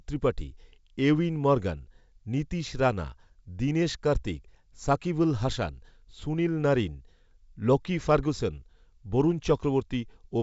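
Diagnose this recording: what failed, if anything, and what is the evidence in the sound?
Nothing failed in this recording: the speech is carried by G.722 wideband telephone coding at 64 kbit/s, which leaves nothing above about 7.7 kHz, and there is no evidence in the sound of anything going wrong.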